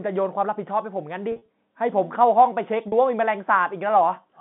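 Packet loss with pitch repetition occurs at 1.32 to 1.48 s and 2.88 to 2.92 s. Lost audio is bridged by repeating the last pitch period. Each gap sounds briefly held and buzzy.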